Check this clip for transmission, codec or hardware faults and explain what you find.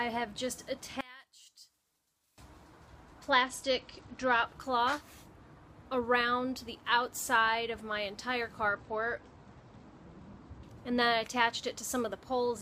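Two kinds of fault are present.

From 1.01 to 2.38 s the sound drops by about 24 dB to a faint copy. The likely cause is one channel inverted: opposite-polarity channels cancel their shared centre content when summed to mono.

From 3.30 to 4.46 s and again from 8.68 to 10.64 s, the treble dulls and a gritty grain appears, then clears. This is a Bluetooth SBC bit pool drop: a congested link forces fewer bits, which starves the upper sub-bands and coarsens the rest. The sound points to a fall from a bit pool of 31 to 11, around 83 kbps. Unlike a dropout, the audio never stops.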